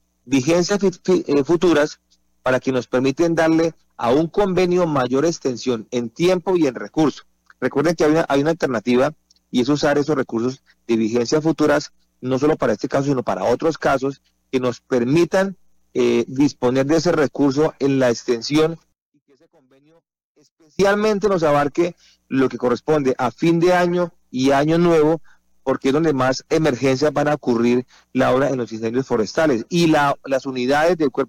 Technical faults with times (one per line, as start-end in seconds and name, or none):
18.92-20.79 one channel inverted